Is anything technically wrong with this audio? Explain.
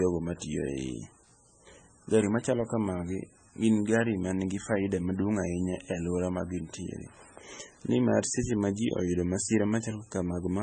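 Yes, two faults run through the whole speech clip.

Low bit depth with noise shaping, throughout: the speech is stored with very few amplitude steps, which fits an 8-bit signal, and the rounding error is pushed upward in frequency. The result is a constant thin hiss, climbing sharply toward the treble, sitting roughly 20 dB below the speech.

MP3 compression, throughout, is the likely cause of heavy coding damage: nothing remains above 9 kHz, and the speech sounds watery and swirly, with smeared onsets. That points to a very low bitrate, around 17 kbps, where the encoder discards the treble and drops weak spectral detail that flickers from frame to frame.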